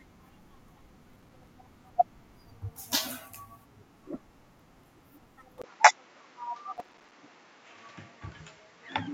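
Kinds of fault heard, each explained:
Input switched to a poorer device: At about 5.62 s there's a short gap of roughly 20 ms, and from then to the end the speech sounds duller and boxier, with nothing above about 7.6 kHz. A fresh noise floor sits about 30 dB under the voice, while loudness stays about the same. The likely cause is the system moving its input to a lower-grade microphone or a headset call profile partway through.
Processor overload crackle: From 6.76 s to 7.13 s a gritty crackle rides over the speech. The processor couldn't finish its small audio buffers in time, and each miss came out as a tiny hard-edged dropout to silence. Strung together, those dropouts make the tearing texture. The buffers were about 3 ms each, with around thirty missed over the stretch before the load eased and the crackle stopped.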